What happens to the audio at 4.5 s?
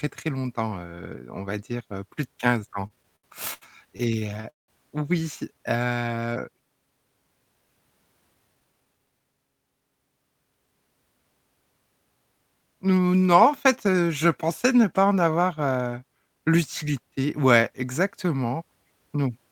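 Repeated stalls (stutter) run from 2.59 to 4.71 s, between "dire heu plus de" and "oui c": the jitter buffer kept emptying, so speech stretches and stutters. Unlike dropouts, nothing is lost.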